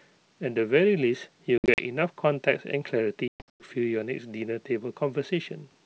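Packet loss on an ADPCM call cuts hard-edged silent holes, shown as flat waveform and blank spectrogram columns, at 1.58 to 1.81 s (120 ms lost, gaps up to 60 ms) and 3.28 to 3.66 s (280 ms, up to 120 ms). The decoder's predictor and step size then mismatch the sender's, so sound resumes slightly distorted before settling.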